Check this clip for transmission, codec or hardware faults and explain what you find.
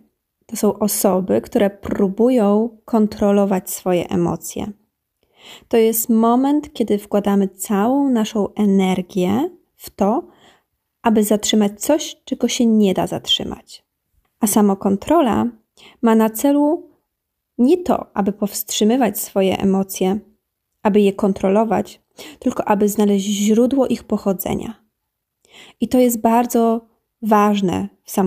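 Nothing faulty can be heard anywhere in the speech.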